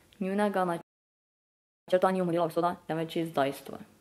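At 0.81 s the speech cuts off mid-flow and the output goes fully silent until 1.88 s, a gap of about 1.07 s. This is a playback stall, likely the player running dry of data or its output thread being blocked. On a waveform the trace drops abruptly to a flat line with no fade. On a spectrogram a clean vertical edge leads into an empty band across all frequencies that lasts just over a second.

From 1.88 s to 2.94 s the player works off the backlog through time-compressed catch-up, running at 2.0 times normal speed. It trims the buffered audio by removing short segments and cross-fading across the joins. The speech sounds rushed but stays at its normal pitch. On a spectrogram the harmonic spacing is unchanged while syllables and pauses are squeezed to half their length. The waveform shows dense, tightly packed envelopes with occasional small irregularities at the cross-fades.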